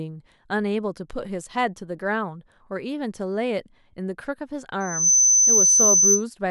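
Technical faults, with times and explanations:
4.80–6.24 s, loudspeaker feedback squeal: the microphone-loudspeaker loop exceeds unity gain at 6.1 kHz, so a shrill tone swells within a third of a second, roughly 10 dB above the speech.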